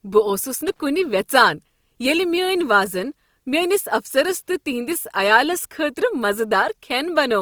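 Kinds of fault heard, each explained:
Opus compression: Heard throughout the clip, the speech has a rough, grainy texture, with harmonics turned noisy rather than clean. The likely cause is Opus coding in its music (CELT) mode. It preserves the energy in each frequency band but, short of bits, fills band detail with folded copies of lower bands or with noise. The damage is plainly audible, which fits a low bitrate around 24 kbps. The bandwidth stays full, reaching about 20.3 kHz.
Loose connector crackle: From 0.68 to 0.80 s, a burst of irregular crackle and scratching lasts about 0.12 s. It comes from a worn or dirty contact that rapidly makes and breaks connection as it shifts. Each break chops the signal, and each reconnection snaps any DC offset on the line back in as a pop. The result is this short, uneven stretch of crackle over the speech rather than a steady noise.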